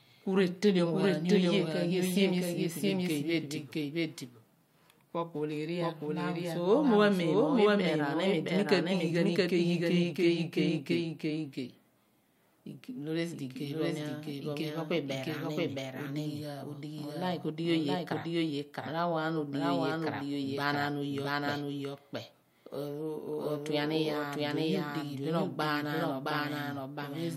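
A doubled audio track runs throughout: a second, equally loud copy of the speech trails by about 0.7 s, likely from a slower capture path recording it twice.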